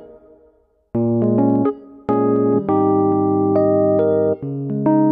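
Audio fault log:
No faults detected in this audio.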